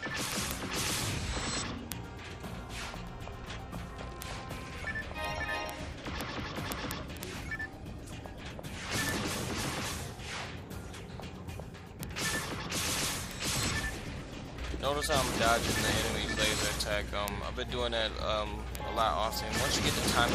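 Word clock ticks run from 0.13 s to 20.29 s: an unlocked receiving clock slips one sample roughly every 70 ms, producing a steady stream of sharp ticks.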